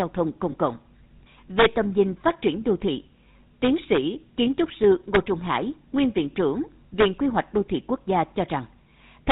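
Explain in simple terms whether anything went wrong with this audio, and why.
GSM full-rate codec, throughout: the speech was squeezed through the original mobile-phone codec, which rebuilds the voice from a simple model of the throat driven by evenly spaced pulses. Everything above 4 kHz is gone, leaving a clearly buzzy, gravelly, narrow sound.

Lost GSM frame, 0.52 to 0.55 s: one short chunk of the signal never arrived. The decoder filled the gap by repeating the previous chunk's settings. This produces a brief rough, metallic ring instead of the real sound.

Integer overflow, at 1.59 to 1.66 s just before "tầm nhìn phát triển", 3.64 to 3.97 s just before "kiến trúc sư", 5.15 s just after "kiến trúc sư", 7.01 to 7.39 s, and 9.30 s at the very end. Loud peaks exceeded the largest number the system could store. Instead of being capped, they wrapped around to the opposite extreme, causing harsh, violent cracks.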